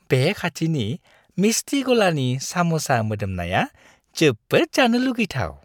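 No technical faults are audible.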